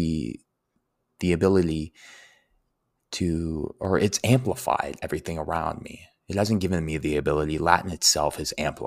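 A speech clip where the stream likely has dropped samples twice, losing only a fraction of a millisecond each time so the waveform jumps straight to a later value. Each jump is heard as one sharp, isolated click, at 1.75 s and 3.85 s.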